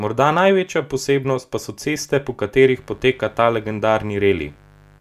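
From 2.68 s to the end of the clip, mains buzz intrudes on the speech: an unshielded or switching-interference path lets spikes in twice per 50 Hz cycle, spraying harmonics up into the kilohertz range. It sounds like a steady, raspy buzz, sitting well below the speech.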